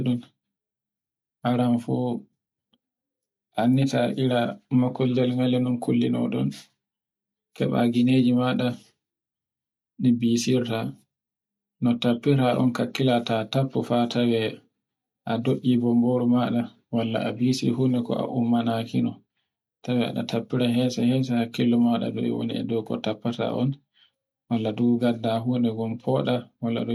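Sample clock jitter runs throughout: timing wobble of a fraction of a microsecond leaves faint hiss roughly 55 dB down, tracking loud sibilant speech on the spectrogram, absent in pauses.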